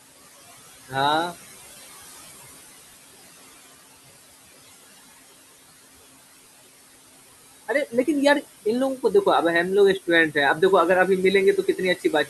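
Right from the start and all the way through you can hear noise suppressor artifacts. The suppressor is pulling down whatever bands it reckons are steady background, about 17 dB of it, and re-deciding every frame. The room noise, which sits roughly 15 dB under the speech, drops away in the gaps and creeps back up whenever someone talks.

Right at the tail, from 11.96 to 12.28 s, the suppressor mistakes some of the speech itself for noise and turns it down along with the background. That's speech cut by the noise suppressor. Parts of that last stretch, adding up to around a tenth of a second, get pushed down by as much as about 12 dB. The closing sounds come out swallowed and faint.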